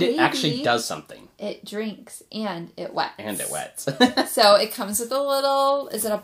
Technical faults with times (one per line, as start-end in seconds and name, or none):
4.43-6.24 pre-emphasis left on